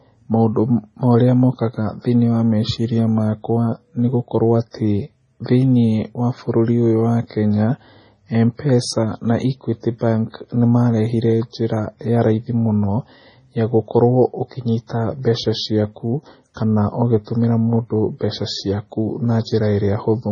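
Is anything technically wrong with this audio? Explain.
Yes. Throughout the speech the sound is watery and swirly, with a metallic chirp on sibilants, smeared consonant onsets, and nothing at all above 10.4 kHz. This is likely heavy MP3 compression at a starved bitrate, something near 24 kbps. Short of bits, the encoder cut the treble at a fixed point and dropped weak frequency lines, which flicker in and out between frames.

Pre-echo appears twice: after "meciria makwa nĩ gũkorwo" at 4.71 to 4.74 s, a hiss about 35 ms long, and after "mbeca ciaku kana" at 17.25 to 17.27 s, about 26 ms long. Each time a short hiss arrives just ahead of a sharp attack, which then sounds soft. The codec spread its quantisation noise across the whole block, so noise meant for the loud onset leaked into the quiet moment before it.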